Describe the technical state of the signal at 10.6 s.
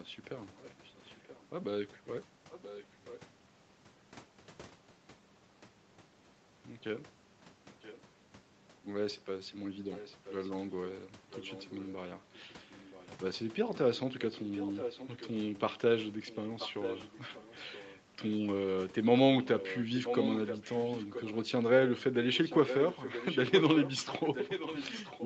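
An echo leak runs from 9.92 to 10.77 s: a faint copy of the speech, about 15 dB down, trails 978 ms behind, likely from a far-end loudspeaker's incomplete echo cancellation.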